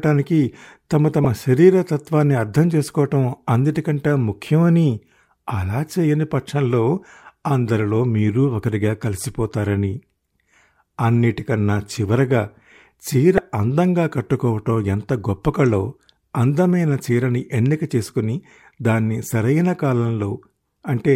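Damaged data in a compressed stream strikes twice, at 1.24 s and again from 13.35 to 13.39 s. Corrupted bytes leave the decoder misreading frames and hunting for the next valid header, so each spot breaks into a brief chirp, squawk, click or short hole cutting across the speech.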